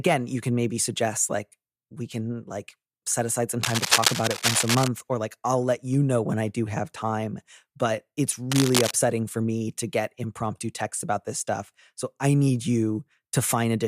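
From 3.61 to 4.88 s, after "like set aside some" and before "or like I'll let", a burst of cable scratch noise rides over the speech as dense, irregular crackling, roughly as loud as the voice. It returns more briefly from 8.52 to 8.91 s, between "have time but it's" and "for me to get". The likely cause is a worn cable or connector being moved, its contact resistance fluctuating rapidly.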